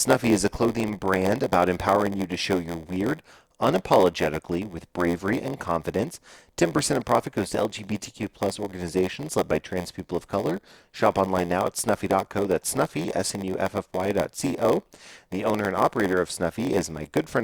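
From start to finish the speech carries a block size mismatch (padded): each block arriving downstream is shorter than the stage reading it expects, so the missing tail is filled with silence. That gap recurs about 86.1 times a second, which fits 512-sample reads at 44.1 kHz, producing a steady buzz. Playback runs at 0.938 times normal speed. The waveform shows brief flat dropouts every 11.6 ms, and the spectrogram shows matching vertical stripes with a comb of lines spaced 86.1 Hz apart.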